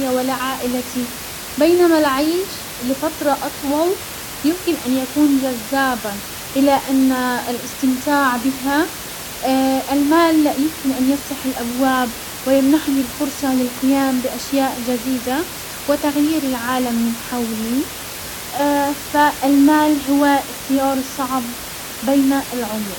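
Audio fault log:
Nothing wrong turns up anywhere in this speech recording, just a bit of room noise sitting about 12 dB under the talking, which is simply part of where the microphone was.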